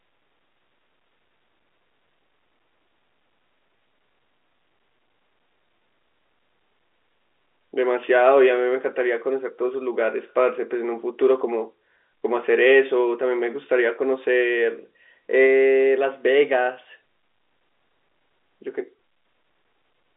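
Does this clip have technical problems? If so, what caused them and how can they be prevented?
No, no technical faults here.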